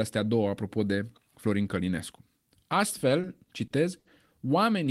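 From 3.21 to 4.07 s the speech stutters in repeated stalls: four times the jitter buffer ran dry, and the last sound was stretched over the waits, up to 70 ms each. Unlike dropouts, nothing is lost; it drags.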